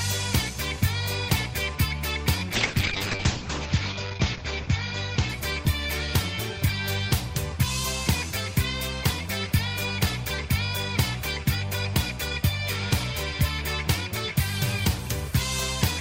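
From 2.55 to 7.09 s there is a call bitrate drop. The encoder got far fewer bits, and the sound fits a fall from 64 to 8 kbps. High frequencies vanish above 8 kHz. The audio turns coarse and muffled, worst for about 1.2 s.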